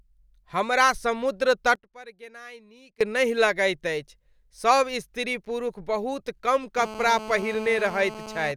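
From 1.75 s to 3.01 s the speech suddenly drops away, falling by about 22 dB and leaving only a faint remnant before returning at full strength. This is most likely one channel inverted: if one side of the stereo pair has its polarity reversed, everything common to both channels, including the centred voice and its low end, cancels when the two are summed to mono, and only the small difference between them survives.

From 6.78 s to 8.52 s a hard, raspy buzz sits under the speech, about 14 dB below it, pitched at 217 Hz and thick with harmonics. It holds nearly steady and bears no relation to what is being said. This is GSM phone buzz. A nearby 2G phone on a call transmits in regular bursts about 217 times a second, and the audio circuitry rectifies those radio pulses into an audible tone at that rate.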